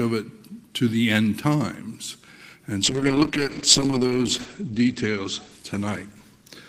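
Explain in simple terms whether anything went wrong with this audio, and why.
Something did go wrong: a call bitrate drop starting at 2.84 s and lasting to the end. The connection's estimate of available bandwidth fell sharply, so the encoder was told to squeeze the sound into far fewer bits. With so little data it codes everything more coarsely and throws away the upper frequencies, keeping only those below about 8 kHz. From 2.84 s the audio turns muffled and rough, bottoming out for about 1.2 seconds, and never recovers before the clip ends.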